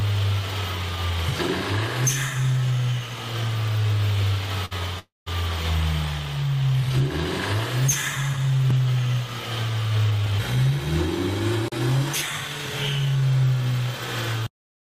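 At 4.65 s a short stall from a late packet holds the sound for 56 ms until 4.73 s. The receiver stretched its last audio while waiting, then resumed at the same point. On a spectrogram the harmonics run flat and smeared.

From 4.99 s to 5.28 s a call audio freeze inserts a 274 ms gap, likely from packets held up in transit emptying the jitter buffer. The last sound decays into a fading buzz or hiss, then about 160 ms of silence, seen as a flat waveform.

Between 10.04 s and 10.71 s a jitter buffer speed-up plays the sound at 112% speed without changing pitch. Short pitch-period pieces, roughly a tenth of a second in total, were cut to reduce excess delay, so this passage sounds hurried and looks compressed in time.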